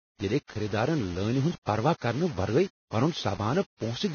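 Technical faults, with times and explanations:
Throughout, low bit depth without dither. A grainy distortion rides on the speech for the whole clip. It sits roughly 20 dB below the signal and moves with it, so it is not a steady background hiss. The grit is tied to the sound itself. The likely cause is rounding to very few levels with no dither, which fits about 5 bits. Without dither, the rounding error follows the waveform and becomes audible distortion.
Throughout, Vorbis compression. Nothing is heard above 6.6 kHz, so the top end is cut off and sounds dull. What treble remains is hissy and grainy. Tones sound roughened and attacks are blurred. The codec damage is heavy. This fits a low Vorbis bitrate near 17 kbps. At that rate, fine spectral detail is quantised so coarsely that it turns into noise of similar energy. The cut-off is also pulled down.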